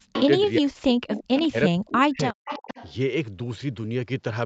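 From 0.0 to 0.17 s, and again across 0.59 to 2.37 s, the speech drops by up to about 40 dB or breaks into pieces. This is speech suppressed in double talk, likely the echo canceller muting its own talker while the far side also spoke. Unlike echo, nothing extra is added; the voice itself thins or vanishes.

At 0.14 to 0.26 s, 1.36 to 1.47 s and 2.31 to 2.92 s, a copy of the speech trails 361 ms behind, about 10 to 15 dB below the speech. This is echo leak, likely loudspeaker pickup that the canceller did not fully remove.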